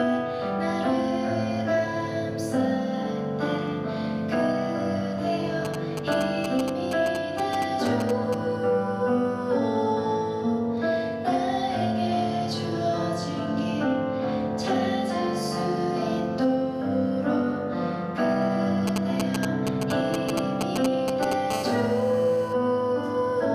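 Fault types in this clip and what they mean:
GSM signalling bursts: A nearby 2G phone sends short groups of radio bursts while signalling. The audio circuit rectifies them. They sound like a galloping run of ticks and brief 217 Hz buzzes, from 5.65 to 8.35 s and from 18.87 to 21.33 s.
GSM phone buzz: Here the phone transmits steadily, as in a call, pulsing 217 times a second. Rectified, this becomes a hard, raspy 217 Hz buzz with many harmonics, unrelated to the sound. It runs from 21.51 to 22.53 s, about 14 dB below the signal.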